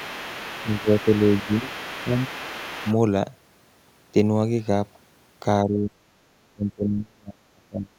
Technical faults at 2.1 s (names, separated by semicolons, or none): other side's voice leaking through; speech suppressed in double talk